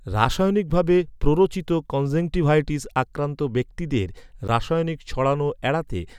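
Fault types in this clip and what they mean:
Block of digital silence: the audio path failed to deliver samples in time, so short runs were written as zeros. In this speech clip that gives two abrupt dropouts, about 6 ms before "ভাবে প্ররোচিত কনজেংটিভাইটিস আক্রান্ত" and about 12 ms after "প্ররোচিত কনজেংটিভাইটিস আক্রান্ত ব্যক্তিদের", each heard as a tick, lengths fitting 256- and 512-sample buffers.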